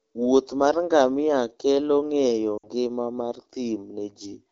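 Lost AMR speech frames at 2.58 to 2.70 s interrupt this speech clip. For about 60 ms, which fits three consecutive 20 ms frames, the decoder repeats its last good pitch and vocal tract settings at falling gain, so the sound smears and fades before returning briefly rough.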